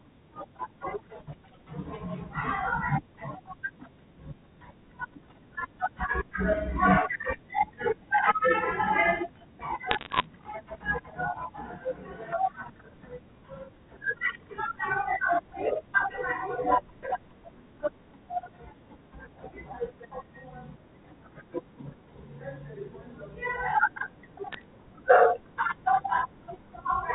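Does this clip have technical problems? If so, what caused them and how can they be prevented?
Yes. Bit errors on a digital phone line cause two bursts of sharp ticks and crackle over the speech, from 9.91 to 10.26 s and from 24.53 to 24.64 s, where flipped bits in the mu-law G.711 stream corrupt individual samples. The error rate is roughly half a percent in the first burst and a few tenths of a percent in the second. Clean line conditions or a link with error detection and concealment would prevent this.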